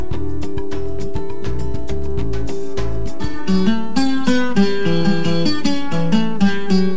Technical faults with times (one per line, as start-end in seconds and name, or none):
none